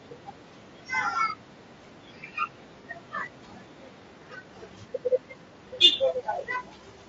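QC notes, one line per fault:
throughout: low-delay AAC compression. The speech sounds rough and grainy, with noise filling the gaps between harmonics and a thin, synthetic top end. This is likely AAC-ELD at a low rate, fitting about 32 kbps. Its short frames blur pitch detail, unlike the pre-echo smearing of ordinary long-frame codecs.
2.81–2.85 s: AAC frame loss with concealment. A brief concealed patch of about 30 ms, consistent with a single lost frame. The decoder rebuilt the gap from the last good spectrum. Unlike a dropout, it never drops to silence, and the speech resumes with no fade.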